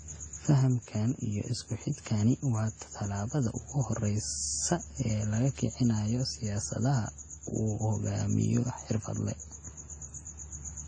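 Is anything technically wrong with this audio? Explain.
Yes. Throughout the clip, the speech shows signs of transcoding between lossy codecs. The sound is likely the result of one lossy encode, pointing to WMA at around 48 kbit/s, that was then re-encoded as AAC-LC at around 32 kbit/s. The second encoder spent its limited bits reproducing the first one's artefacts, then layered its own on top. Both kinds of damage are audible at once, and nothing survives above 9 kHz. On a spectrogram this appears as a hard, flat ceiling at 9 kHz with patchy, blotchy high-frequency content beneath it.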